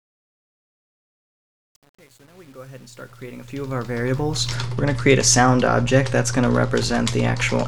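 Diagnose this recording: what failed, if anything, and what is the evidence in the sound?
Truncation distortion on a fade, at the gain or sample-format stage. The fade-in from 0.0 to 4.53 s sounds gritty, worst until 4.09 s. The fade itself lands at 4.52 s. The grain suggests only about 9 bits kept without dither, so quiet levels collapse into coarse steps.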